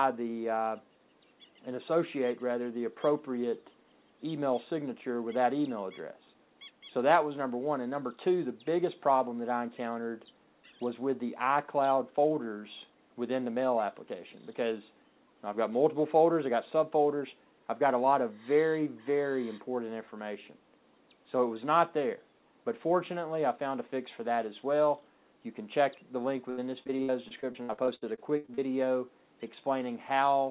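The audio comes through a call path with nothing above 4 kHz, which fits G.711 A-law at 64 kbps. From 26.5 to 28.6 s there is repeated packet loss, giving a robotic sound. Many short holes follow one another, the longest 73 ms. Each is patched by continuing the previous sound. About 27% of that stretch is concealed, so it sounds choppy, with pieces missing.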